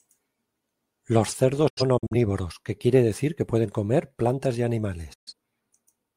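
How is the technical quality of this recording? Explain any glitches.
The recording has two digital broadcast dropouts. The first runs from 1.68 to 2.15 s, just before "que quiere decir que". The second runs from 5.13 to 5.33 s, just after "pueden comer plantas y". In each, the receiver lost frames or they failed their checksum, so it muted until good frames resumed. The speech fades out within 8 ms and drops into silence. The first is several short holes totalling 171 ms over 427 ms, the longest 85 ms, which fits about four lost frames. The second loses 128 ms, suggesting three.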